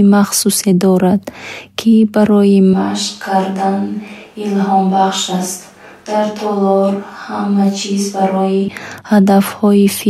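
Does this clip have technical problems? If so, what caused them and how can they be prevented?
Yes. From 2.74 to 8.68 s the speech turns hollow, roomy and about 5 dB quieter with more background noise, likely a switch to a distant microphone after the close one dropped out. Monitoring the close microphone's feed and checking its batteries and connections would prevent this.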